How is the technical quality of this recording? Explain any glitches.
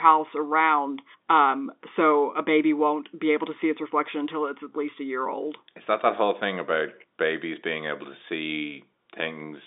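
Nothing glitchy turns up in this speech recording, which simply carries the narrow band of G.711 telephone coding, running from about 250 Hz to 3.7 kHz with nothing above 3.8 kHz.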